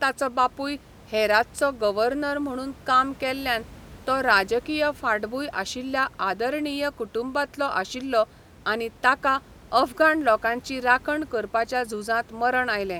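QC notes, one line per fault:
Nothing to flag on this speech clip; no faults turn up anywhere along it.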